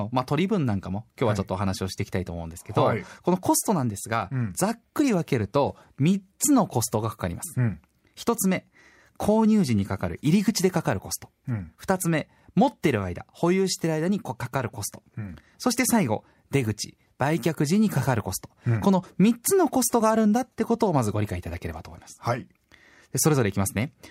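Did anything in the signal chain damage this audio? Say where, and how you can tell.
No, nothing in the signal chain has damaged this speech recording. I can't hear any audible sign of trouble at any stage, from capture through to playback.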